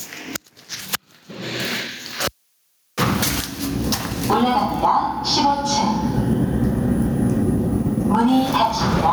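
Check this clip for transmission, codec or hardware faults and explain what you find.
One hardware fault runs through the whole clip: gain pumping. The gain swings by around 25 dB, leaving everything squashed and flat in level. The likely cause is input gain set far too high, with a fast limiter clamping down on every peak.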